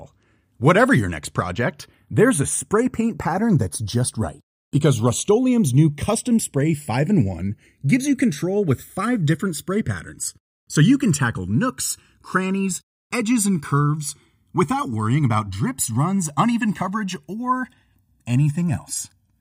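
Throughout the speech, the channels drift apart. Left and right seem to run on separate clocks, about 70 ppm apart. The delay between them slowly grows to around 1.5 ms. Summed to mono, comb notches sweep through the spectrum, heard as slow flanging.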